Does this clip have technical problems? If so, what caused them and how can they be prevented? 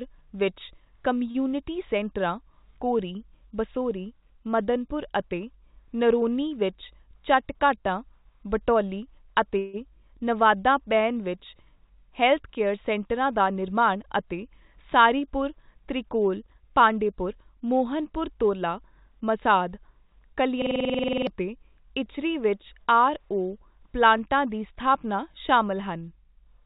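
Yes, there are a few.

At 1.31–1.37 s there's a short stall from a late packet. The jitter buffer ran dry, so the receiver held the last sound for about 34 ms, then carried on without losing anything. A slightly deeper jitter buffer would absorb delays like this.

At 6.94–7.84 s, 13.20–14.27 s, and 16.44–17.27 s (between "ਸਾਰੀਪੁਰ ਤ੍ਰਿਕੌਲ" and "ਮੋਹਨਪੁਰ ਤੋਲਾ ਮਸਾਦ"), there's a jitter buffer speed-up. Pitch periods were trimmed to drain excess delay, so the speech runs 4%, 8% and 6% fast, shedding roughly 40, 100 and 50 ms. Steadier network delivery, or gentler buffer shrinking, would avoid the hurried stretches.

At 9.59–9.76 s, just before "ਨਵਾਦਾ ਬੇਨ ਵਿੱਚ", there's a call audio freeze. The sound is stretched into a fading buzz or hiss for about 149 ms, with no true silence, and nothing is lost. The likely cause is packets held up on the network. Better network quality-of-service or a larger jitter margin would prevent it.

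At 20.62–21.27 s, just before "ਅਤੇ ਇਚਰੀ ਵਿੱਚ ਆਰ", there's a system hang loop. A 46 ms chunk repeats 14 times, stuttering at about 21.5 Hz, which fits a 2048-sample ring buffer cycling while the system froze. Roughly 0.7 s of audio is lost. Fixing the driver or CPU stall and muting the output on underrun would stop the looping.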